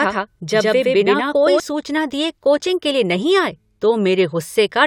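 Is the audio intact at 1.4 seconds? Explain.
No: a doubled audio track runs from the start to 1.6 s, just before "सूचना दिए कोचिंग के". A slower second path likely mixes in a dry, equally loud copy about a tenth of a second late.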